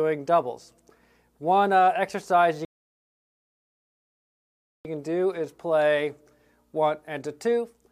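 The player ran dry of downloaded audio and waited for more to arrive, a rebuffering stall, so the sound drops to silence at 2.65 s and resumes at 4.85 s exactly where it broke off, losing nothing but adding 2.2 s of dead air.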